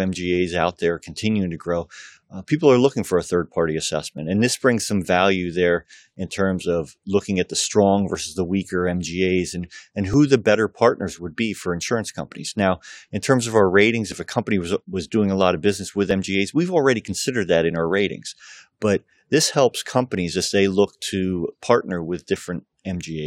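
Overlap between stream segments occurs at 2.17, 4.18, 6.16, 8.15, 10.14, 12.13, 14.12 and 16.11 s, roughly every 2 s in step with the segment boundaries. Adjacent segments carry overlapping time stamps, so the player discards speech that was never actually duplicated, removing about 11 to 18 ms each time. The waveform jumps, giving a small click or skip, as between "terms of our ratings" and "if a company was" at 14.12 s.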